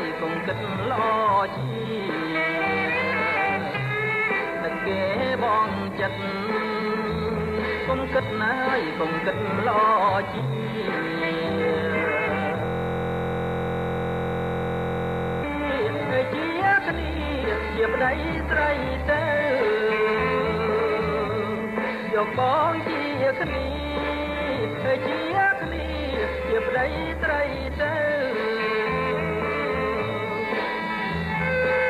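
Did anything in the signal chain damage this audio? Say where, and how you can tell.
Yes. From 12.65 s to 15.44 s the sound locks into a rigid, mechanical buzz at about 43.1 Hz: one 23.22 ms fragment repeats exactly, about 120 times, with no variation between cycles. This is a system hang loop at the driver or buffer stage. The host stopped delivering new audio while the output hardware kept replaying the same ring buffer, and the loop length fits a 1024-sample buffer.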